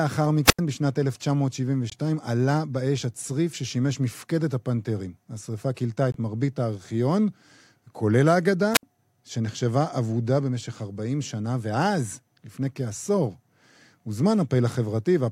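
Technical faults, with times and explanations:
0.44–0.60 s and 8.72–8.83 s: wireless microphone squelch dropout. The radio link fades, hiss briefly rises, then the receiver's squelch mutes the output for about 88 ms and 63 ms. A spectrogram shows broadband noise fading into a blank gap; the waveform flattens before the audio resumes.
1.90–1.94 s and 6.12–6.16 s: corrupt frame muted. Damaged compressed frames were rejected by the decoder and replaced with silence, leaving abrupt 40 ms holes while timing stays intact. The waveform drops instantly to near silence, and the spectrogram shows a clean vertical blank band with hard edges.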